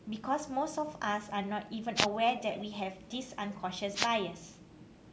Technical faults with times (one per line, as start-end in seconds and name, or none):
1.95-2.07 wireless microphone noise hit
3.94-4.08 wireless microphone noise hit